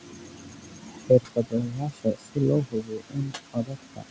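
Right from the start and all the way through, you can hear noise suppressor artifacts. The suppressor keeps pulling down whatever bands it decides are steady noise, so the room noise, sitting about 13 dB under the speech, dips in the gaps and comes back underneath.

Across the whole clip, from 0.0 to 4.10 s, there's also speech cut by the noise suppressor. It's mistaking bits of the speech for background and ducking them along with it, by as much as about 22 dB at the worst point. Softer consonants and word tails end up sounding swallowed and faint. The top end stops around 8 kHz, which fits the G.722 call path.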